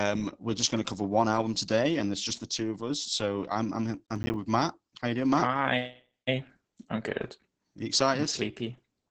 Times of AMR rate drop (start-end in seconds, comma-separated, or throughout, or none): none